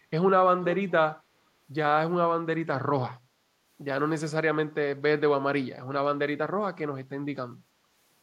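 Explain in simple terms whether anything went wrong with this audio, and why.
Between 0.62 and 0.91 s there is an echo leak: a faint, delayed copy of the speech, trailing the original by about 0.43 s and noticeably quieter than it. The likely cause is that one person was on a loudspeaker, and their phone's echo canceller failed to strip out the sound its own microphone picked up from that speaker. The leftover was sent back down the line, so the speech returns as a brief echo.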